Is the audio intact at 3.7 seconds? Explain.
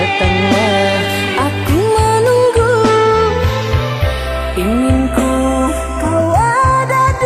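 No. At 3.7 seconds the channels are drifting apart, as they do throughout. Two clocks differing by around 30 ppm let the inter-channel delay slide toward roughly 0.15 ms, so mono sums give slow flanging, seen on a spectrogram as comb notches gliding through the spectrum.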